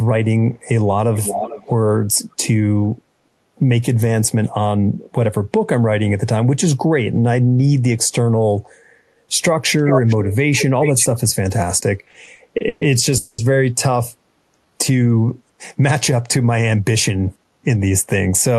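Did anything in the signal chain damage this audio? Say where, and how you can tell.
Yes. The damage comes from two places: the far end's echo handling and the receiving side's jitter buffer in a call path that also carries Opus-style band-limited coding.

Echo leak, at 1.15–1.71 s, 2.14–2.36 s and 9.78–10.36 s: a distinct delayed copy of the speech trails the original by about 0.42 s each time. In the first and third stretches it is only about 5 dB below the speech, while the second is a faint residue. The stage is call processing: the likely cause is a loudspeaker at the other end whose echo canceller let its microphone pickup return. A fixed, discrete lag rather than a smooth decay rules out room reverberation.

Repeated stalls (stutter), from 12.05 to 12.83 s: the sound catches eight times in under a second, with the last sound stretched to fill each wait. About 300 ms is filled in total, the longest hold is 130 ms, and nearly 40% of that span is concealment. 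Nothing is skipped; the speech drags and resumes where it left off. This is a network and jitter-buffer fault, with packets arriving late over and over. Several short holes set it apart from a single freeze.

Call audio freeze, 13.17–13.40 s: a single hold of 210 ms, where the last sound is continued as a fading buzz that never reaches silence before the speech picks up exactly where it stopped. The likely cause is a burst of network delay that emptied the jitter buffer once. The playout delay grows by the same 210 ms. One unbroken hold with no lost material distinguishes it from a dropout or from the stutter before it.

Jitter buffer slow-down, 14.65–15.09 s: the speech runs at about 88% speed with its pitch unchanged, and sounds are slightly drawn out. The receiver repeated single pitch periods to build up its reserve, adding 61 ms. Since pitch does not drop, this is buffer time-stretching in the receiver rather than a clock or tape-speed error, which would lower pitch along with tempo.

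Jitter buffer speed-up, 17.08–18.29 s: the speech hurries to about 110% speed at constant pitch. The receiver trimmed short pitch-period slices to shed excess buffered delay, removing around 150 ms in all. No gaps or clicks mark the cuts, which separates this from packet loss; the material is compressed smoothly rather than dropped in chunks.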